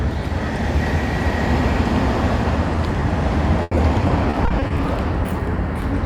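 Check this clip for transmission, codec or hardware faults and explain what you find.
Two kinds of transmission fault are present in this recording of everyday sound, both caused by packets lost in transit.

Short concealed packet loss occurs at 2.75–2.77 s and again at 3.00–3.02 s. Each time, about 10 ms of audio failed to arrive, and the decoder extended the preceding sound to cover the hole before blending back. Each is heard as a brief smear or wobble.

Repeated packet loss (robotic sound) runs from 3.62 to 4.79 s. Packets were dropped over and over, and each hole was patched by continuing the previous sound. About 260 ms was filled in, roughly a fifth of the stretch, with the longest gap at 90 ms. The result is choppy audio with pieces missing.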